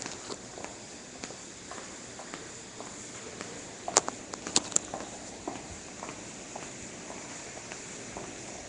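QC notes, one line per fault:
Throughout, Nellymoser compression: rough hissy halo, smeared underwater texture, nothing above 10.6 kHz; likely Asao coding at what sounds like 44 kbps, noise-filling starved bands.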